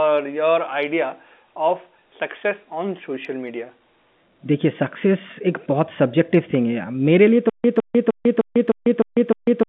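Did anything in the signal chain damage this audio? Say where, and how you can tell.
Yes. From 7.50 s to the end, a stutter with silent gaps: the same 159 ms burst repeats seven times every 305 ms, with 146 ms of digital silence between. It likely comes from a stalled playback buffer replaying its last fragment on each retry. Unlike random dropouts, the gaps keep an even rhythm and the returning sound is identical each time. The narrow telephone band from G.711 coding carries through unchanged.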